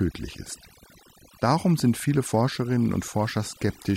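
Throughout the speech, the background drops to near silence scattered with twinkling specks. This is overdone noise removal: a noise reduction setting too strong pushed individual frequency bands down whenever they neared its noise estimate, stripping quieter vocal detail along with the noise.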